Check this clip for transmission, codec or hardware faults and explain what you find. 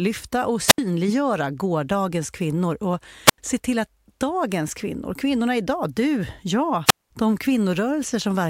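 The clip has three wireless microphone squelch dropouts: at 0.67–0.78 s (about 73 ms muted), at 3.26–3.38 s between "gårdagens kvinnor och" and "se till att dagens" (87 ms), and at 6.86–7.11 s after "kvinnorna idag du jag" (203 ms). Each time, the analogue FM radio signal fades until the receiver's squelch mutes it. The result is a brief swell of hiss, then a gap of near silence before the speech returns.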